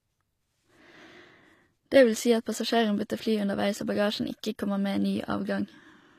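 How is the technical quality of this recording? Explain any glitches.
The recording has plainly audible compression damage throughout. It was likely encoded with HE-AAC at a low bitrate, consistent with about 24 kbps. The codec keeps only the lower spectrum and synthesizes the treble from copied bands, so there is nothing above 14.9 kHz, and s sounds come out gritty and metallic.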